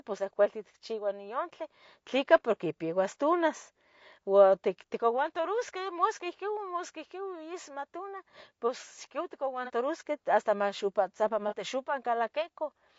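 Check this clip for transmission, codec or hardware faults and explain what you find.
Two faults are present: coding damage throughout the speech, and two brief concealed dropouts near the end.

Low-delay AAC compression: the whole clip sounds rough and grainy, with noise between the harmonics and a thin, synthetic top band. This likely comes from AAC-ELD's short frames resolving pitch poorly, at a rate that fits about 32 kbps. Unlike narrowband telephony, the high band is present but artificial.

AAC frame loss with concealment occurs at 9.65–9.70 s and 11.48–11.53 s. Each is a smeared, noisy patch of roughly 30 ms where the decoder rebuilt one missing frame from the previous spectrum. Unlike a hard dropout, there is no silence or click, just a brief blur.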